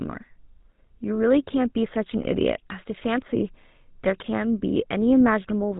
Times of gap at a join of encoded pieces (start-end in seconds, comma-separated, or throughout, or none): none